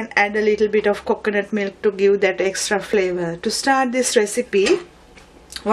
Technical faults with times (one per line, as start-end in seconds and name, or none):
0.94 overlap between stream segments
2.93 overlap between stream segments